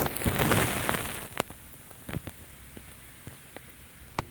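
No technical faults are audible.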